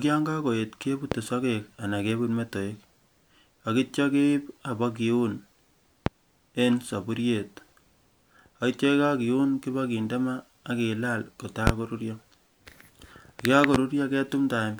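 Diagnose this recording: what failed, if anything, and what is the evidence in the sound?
Four loud pops sit on top of the speech, at 1.12–1.15 s, 6.06–6.10 s, 11.67–11.71 s and 13.75–13.78 s. Each is a single thump lasting under 40 ms and standing roughly 15 to 25 dB above the surrounding level, with the speech continuing underneath. On a waveform each is a tall isolated spike. On a spectrogram it is a thin full-height vertical stripe. The likely cause is a voltage transient in the analogue wiring, from a loose plug, a switch or static, which the following circuits shape into a brief pulse.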